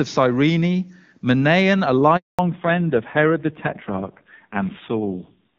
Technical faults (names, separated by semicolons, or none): handover gap; fallback to narrowband